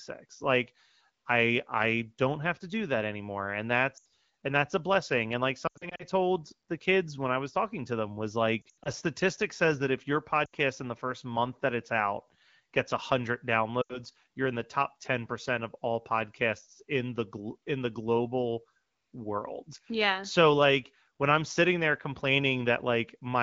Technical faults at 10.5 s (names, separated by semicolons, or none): lost AMR speech frames